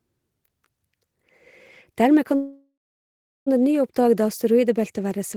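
At 2.35–3.48 s a call audio freeze smears into a fading buzz, then 0.74 s of flat silence, likely from an emptied jitter buffer. Speech resumes intact, 1.1 s late.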